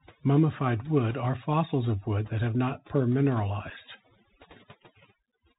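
Throughout, the background sinks to near silence with twinkling specks: overdone noise removal, pulling frequency bands down wherever they resemble noise. The speech is also narrowband, with scratchy s sounds and a granular hiss beneath it, typical of the Bluetooth CVSD headset codec, which passes nothing above 4 kHz and audibly distorts fast high-frequency movement at its 64 kbps one-bit rate. At 2.25 s, just after "are fossils of wood" and before "that have not", a tiny abrupt hole of about 3.8 ms opens, with the level briefly quieter afterwards. At 3.70 s a second 3.8 ms gap does the same. Both are unconcealed Bluetooth headset packet loss, each fitting a single lost packet replaced by silence or an idle pattern.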